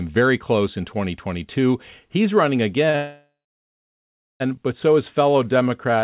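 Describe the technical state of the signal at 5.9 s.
At 5.9 s the receiver's jitter buffer is in a slow-down. Running short of buffered audio, it repeats single pitch periods and slivers of pause many times over to rebuild its reserve, stretching the passage from 5.31 to 6.02 s by 73 ms. The speech plays at about 91% speed with its pitch unchanged, so sounds come out drawn-out, all within the call path's band that stops at 4 kHz.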